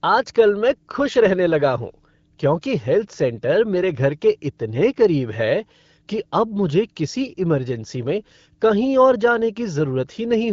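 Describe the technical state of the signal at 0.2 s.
At 0.2 s the speech is intact, with no fault present, just the clear sound of AMR wideband (HD Voice) coding at a rate that fits 12.65 kbit/s.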